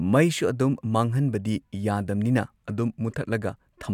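Listening across the whole speech recording turns up no technical fault at any point.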